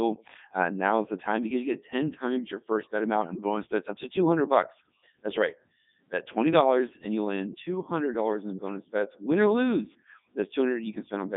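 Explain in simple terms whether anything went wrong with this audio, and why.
Codec 2 vocoder, from start to finish: the speech was rebuilt from a rough outline of pitch and tone rather than the real sound, so it comes out robotic and buzzy.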